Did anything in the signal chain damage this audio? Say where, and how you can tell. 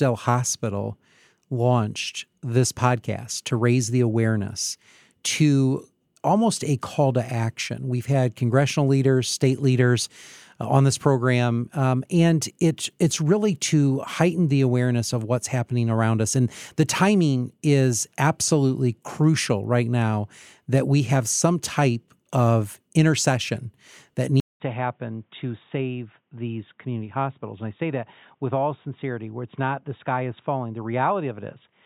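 Yes. At 24.4 s, after a 200 ms silence, the speech turns boxy and slightly quieter, with nothing above 3.8 kHz and a new faint noise floor: likely the input switched to a poorer device.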